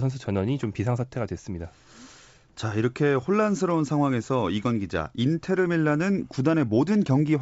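Nothing faulty in this speech: the G.722 wideband telephone coding, running at 64 kbit/s, leaves at most a faint trace.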